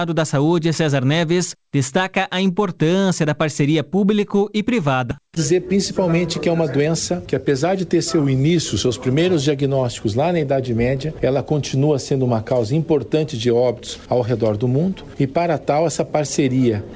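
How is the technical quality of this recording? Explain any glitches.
The recording has three timing glitches close together, all around the middle of the clip.

Skip ahead, at 5.11 s: a stretch of audio was dropped while newer audio was waiting behind it. Roughly a third of a second goes missing. Playback jumps forward with no filler, so the sound on either side of the cut is joined abruptly.

Jitter buffer speed-up, from 5.20 to 7.94 s: the buffer still held more audio than its target, so the receiver repeatedly cut out short pitch-period slices, about 150 ms in total. The sound runs at 106% speed at unchanged pitch and comes across as slightly hurried.

Drift correction step, from 8.20 to 8.84 s: the playback rate drops by about 5.5% in a single step and then snaps back. The sound slows and falls in pitch by close to a semitone, about 99 cents, which briefly detunes it. The likely cause is clock-matching software draining or refilling its buffer.

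The high end of the audio stops at 8 kHz, which fits a G.722 wideband call codec on the transmission path.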